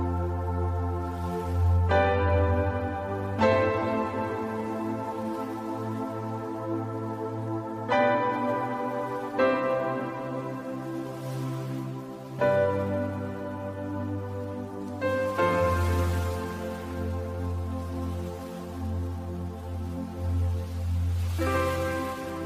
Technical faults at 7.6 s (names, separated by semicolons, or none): none